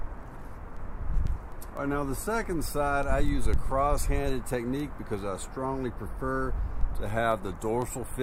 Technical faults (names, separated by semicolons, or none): word clock ticks